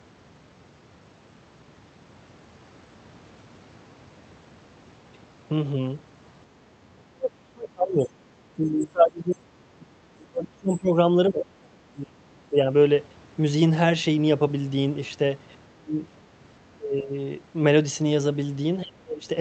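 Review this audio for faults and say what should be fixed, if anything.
Speech suppressed in double talk: the speech ducks by about 15 to 35 dB at 7.1–8.37, 8.55–9.46, 9.63–10.96, 11.29–11.47, 11.84–12.57, 15.71–16.01, 16.75–17.13 and 18.82–19.28 s. The likely cause is an echo canceller treating overlapping far-end talk as echo. In these spans the voice dips, loses its high end or cuts out in pieces. To prevent it, improve the canceller's double-talk detection and cut loudspeaker-to-microphone coupling, for example with a headset.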